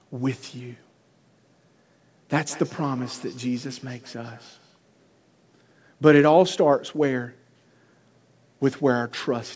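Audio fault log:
2.46–4.81 s, feedback echo between two devices: the speech keeps coming back roughly every 150 ms, each pass thinner and more ringing, peaking at about 23 dB below the direct voice before it fades out. What's happening is one device playing out what the other's mic sent, and that mic catching it again. Each echo canceller only removes its own playback, so the loop survives. The 8 kHz top end is just the G.722 call path.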